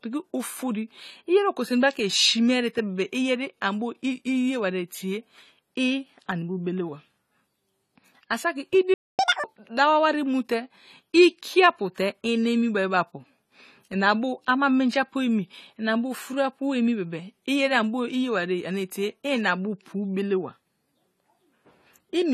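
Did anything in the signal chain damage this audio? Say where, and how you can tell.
Yes. Throughout, the speech sounds dull and smeared, with a fizzy, warbling edge on sibilants. That points to the codec stage, likely AAC compression at a low bitrate, around 32 kbps, where quantisation starves the high bands and blurs transients.

At 8.94 s the sound cuts out for about 0.25 s and resumes at 9.19 s. This is a playback stall, likely the player's buffer running dry or its thread being blocked, so the output went silent until data arrived again.

From 9.19 to 9.44 s the speech runs at double speed, with pitch raised by roughly ten semitones, then snaps back to normal. That is catch-up at higher speed: the player resampled its backlog to recover the time lost in the stall.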